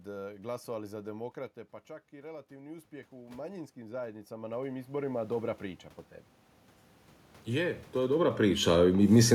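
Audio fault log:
1.86 to 5.9 s, automatic gain rising: the input dropped about 12 dB as the talker moved away near 1 s, so the gain control climbed about 16 dB over four seconds. The room noise swells along with the voice, which a talker simply leaning closer would not cause.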